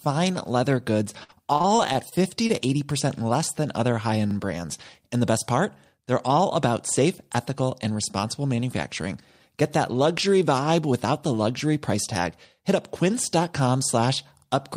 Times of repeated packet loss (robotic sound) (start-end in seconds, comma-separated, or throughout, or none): 1.23-2.51